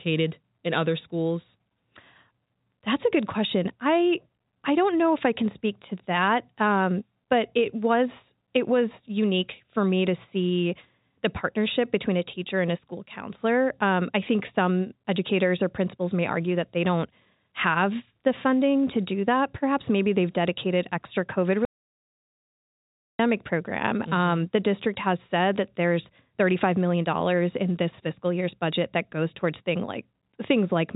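An audio dropout to silence runs from 21.65 s to 23.19 s, removing about 1.54 s of the speech. The input was likely lost while recording continued writing zeros, so the telephone-band sound cuts off abruptly into dead silence with no room tone.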